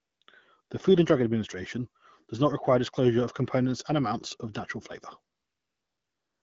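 AMR comfort noise fills the gaps at 0.00 to 0.21 s, 0.23 to 0.27 s, 0.61 to 0.69 s, and from 5.35 s after "amounts of natural flavor" to the end. Speech frames stopped there. Smooth synthetic noise replaces the real background and switches in and out.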